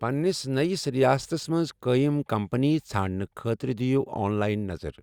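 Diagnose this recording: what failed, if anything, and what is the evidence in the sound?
A Bluetooth stutter breaks the wireless link in this speech. It falls at 1.23 to 1.26 s. One slice of about 23 ms is heard twice, a brief hiccup rather than a buzz. That fits a single lost or late packet. The receiver had nothing new to play, so it replayed its last buffer. When fresh data arrived, the speech resumed further on, with that moment skipped.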